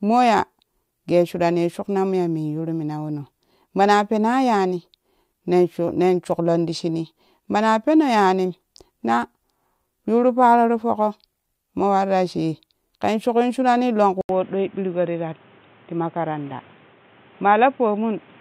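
At 14.21 s the speech cuts out for about 80 ms, then comes back duller, a little quieter, with new background noise well beneath it and nothing above 3.8 kHz until the end. That's likely an input switched to a poorer device mid-recording.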